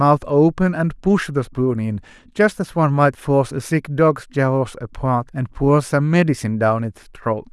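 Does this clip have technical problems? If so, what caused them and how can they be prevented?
No, there are no technical faults to report in this speech recording. Since nothing went wrong, there is no cause to trace and nothing that needs preventing.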